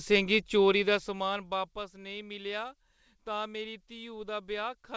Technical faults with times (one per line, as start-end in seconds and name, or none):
none